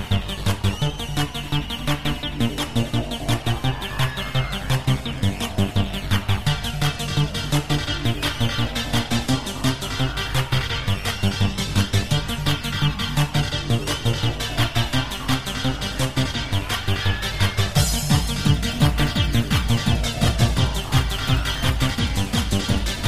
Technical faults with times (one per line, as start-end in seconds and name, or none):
none